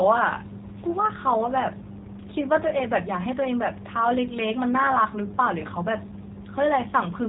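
Throughout, a G.729 codec rebuilds the speech from sparse pulses, consistent with 8 kbit/s. Nothing above 4 kHz passes, and it sounds plainly rough and synthetic.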